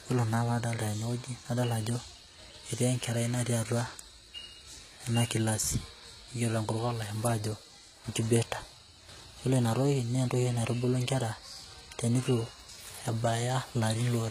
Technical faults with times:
0.00-14.31 HE-AAC compression

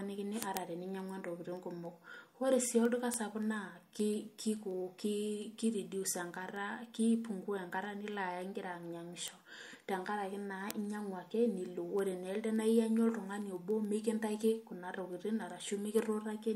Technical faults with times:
0.14-16.55 word clock ticks

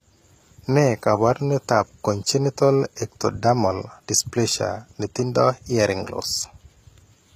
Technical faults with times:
0.00-7.35 HE-AAC compression

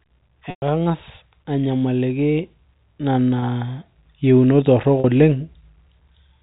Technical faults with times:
0.50-0.62 packet loss with pitch repetition
3.40-3.42 packet loss with pitch repetition
5.00-5.04 packet loss with pitch repetition

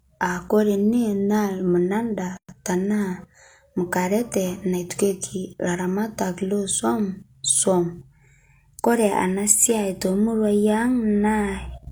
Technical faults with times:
2.37-2.49 gap at a join of encoded pieces
4.90 block of digital silence

